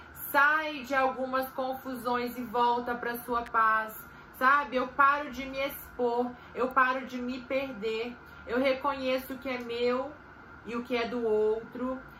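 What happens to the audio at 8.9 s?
At 8.9 s the audio plays through intact, with no dropout, glitch or other fault at that point.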